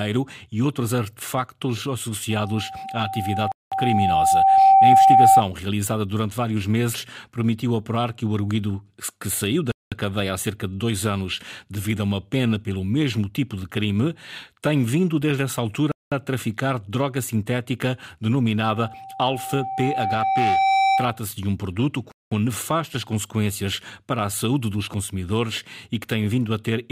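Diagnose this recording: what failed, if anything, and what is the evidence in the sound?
Two loudspeaker feedback squeals occurred at the acoustic and analogue stage, where the microphone hears its own loudspeaker. A single tone at 773 Hz rises from 2.30 to 5.44 s and again from 18.66 to 21.21 s. Each swells over roughly two seconds. The first ends well above the speech level, and the second sits a little above it. At that frequency the loop gain passed one, so the tone kept feeding itself.

Gaps between chunks show up at 3.52, 9.72, 15.92 and 22.12 s. Each is a 200 ms hole of silence. They recur every 6.2 s. That regular spacing points to audio carried in 6-second chunks, with a pause inserted at each join during transmission or playback. The speech around each hole is not lost or shortened. It is pushed later, so the flow simply stops and restarts abruptly.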